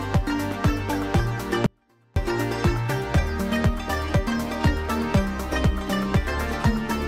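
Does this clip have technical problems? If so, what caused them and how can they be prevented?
Yes. There is an audio dropout to a faint residue from 1.66 to 2.16 s. The sound cuts off abruptly for about half a second, then returns just as suddenly. The gap is not silent. A faint trace of the sound remains, roughly 35 dB below its normal level. That residue suggests the signal path after the break stayed live. The likely cause is a brief loss of the main signal upstream, such as a failing connection or interrupted feed. Secure and check cables and links before recording, and monitor the feed so that any interruption is caught at once.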